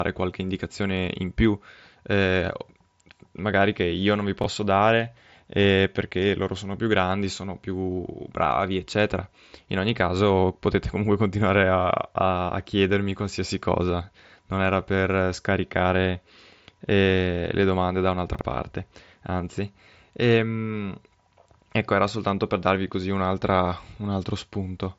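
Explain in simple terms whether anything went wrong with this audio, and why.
Chunks out of order: twice, a short block of audio about 21 ms long reached the output late and played after blocks meant to follow it. Nothing is missing, but the order is scrambled, so each spot sounds like a brief jumble with abrupt joins. The first is at 4.42 to 4.46 s, one block late, between "che io non vi" and "dare eh perché loro". The second is at 18.35 to 18.41 s, two blocks late, between "eh le domande da" and "parte anzi". The speech came through a Bluetooth mSBC headset link, which is why nothing above about 7.7 kHz is heard.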